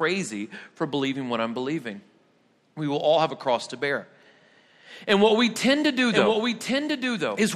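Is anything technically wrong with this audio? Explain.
Yes. From 5.96 s, just after "what we tend to", to the end, there is a doubled audio track. A full-band copy of the speech, about a second late and roughly 5 dB quieter, enters abruptly with no reverberant tail. It likely comes from a slower second capture path. On a spectrogram, the harmonic patterns repeat about a second apart, and the waveform thickens suddenly at the onset.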